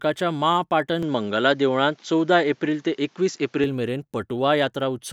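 From 1.03 to 3.64 s the speech turns duller, with nothing above 7.6 kHz, a level shift and new background noise, likely an input switched to a poorer device.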